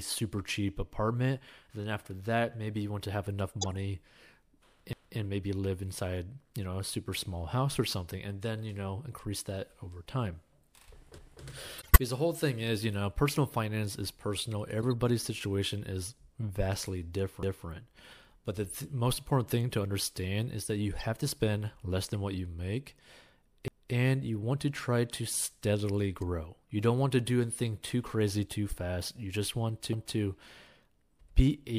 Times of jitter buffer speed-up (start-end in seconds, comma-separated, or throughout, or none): none